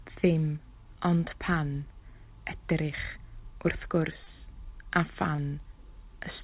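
At 4.24 s and again at 5.36 s, short concealed packet loss occurs. Each time, about 20 ms of audio failed to arrive in time. The receiver covered the gap by extending the preceding sound, heard as a brief smear or wobble, within narrowband call audio that stops at 4 kHz.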